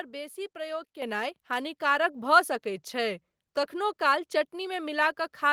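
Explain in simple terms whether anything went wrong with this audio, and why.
At 1.02 s the microphone volume stepped up. The software found the speech too quiet and raised the input in one jump, so voice and background suddenly get louder together.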